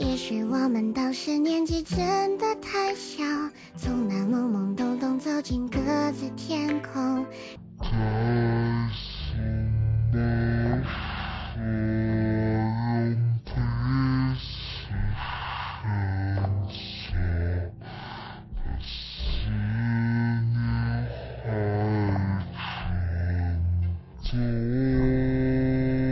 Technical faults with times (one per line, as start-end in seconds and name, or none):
7.56-26.11 wrong sample rate